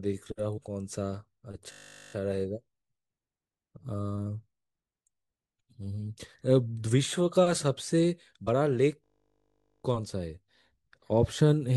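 At 0.56 to 0.59 s the speech jumps forward. These are compressed frames skipped. Whole frames never reach the output, so about 150 ms of audio is simply gone. That gap fits a run of several consecutive frames.

From 1.72 to 2.14 s comes a system hang loop. The playback froze while the hardware kept replaying its ring buffer. One 20 ms slice repeats 21 times. At a 50 Hz loop rate it sounds like a steady buzz, not a stutter. Little or no audio seems lost afterwards.

At 8.46 s a second frame skip drops roughly 100 ms.

From 9.04 to 9.84 s the hang loop returns. The same 20 ms buffer cycles 40 times. It makes an 800 ms buzz at 50 Hz.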